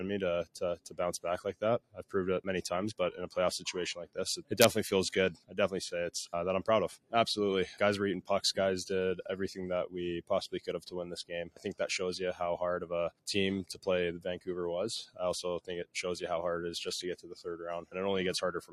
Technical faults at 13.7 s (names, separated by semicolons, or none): noise suppressor applied to music or sounds; sound cut by the noise suppressor